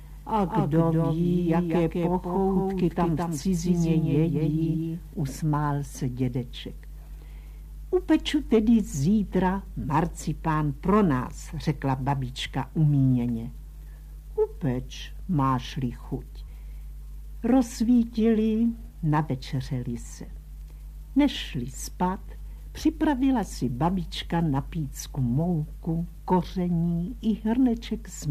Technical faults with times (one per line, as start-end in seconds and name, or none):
0.00-5.14 doubled audio track